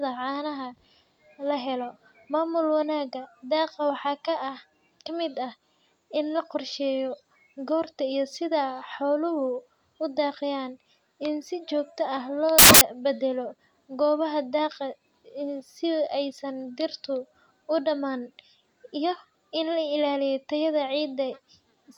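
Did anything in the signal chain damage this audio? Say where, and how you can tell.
Yes. At the sample-format conversion stage, from 12.59 to 12.81 s, between "si jogto ah loo" and "badalo gobaha daaqa", the speech turns into loud, harsh broadband noise. These are samples built from the wrong bytes: misaligned or swapped bytes push the fast-changing low bits into each value's most significant position.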